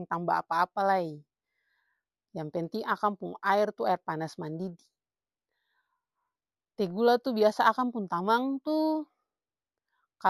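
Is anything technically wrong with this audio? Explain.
Yes. Imaging from linear upsampling runs through the whole clip. Content stops near 8 kHz, which fits a 16 kHz original raised to 48 kHz by straight-line interpolation. A faint mirror image, about 35 dB down, fills 8 to 16 kHz. Sibilants carry a light metallic shimmer.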